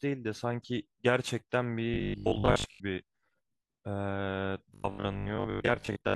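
Speech that twice turns into a rigid, metallic 50 Hz buzz, from 1.94 to 2.82 s and again from 4.74 to 6.14 s: robotic sound from repeated short buffers, likely caused by a 20 ms chunk being replayed in place of missing audio, covering most of the first stretch and about half the second.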